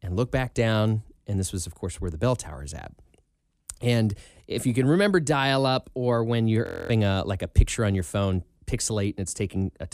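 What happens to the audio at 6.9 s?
Just after "dial up or when", the speech freezes into a steady 43 Hz buzz from 6.66 to 6.90 s. A system hang loop replays one 23 ms ring buffer, consistent with 1024 samples, about ten times, losing roughly a fifth of a second before "a like a picture".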